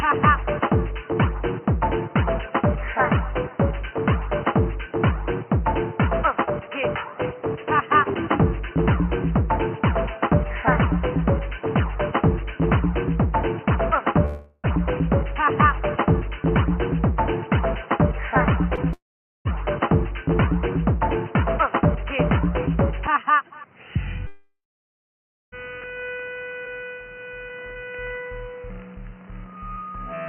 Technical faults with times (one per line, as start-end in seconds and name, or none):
14.25-14.66 long network dropout
18.76-18.79 short concealed packet loss
18.93-19.47 long network dropout
24.27-25.54 long network dropout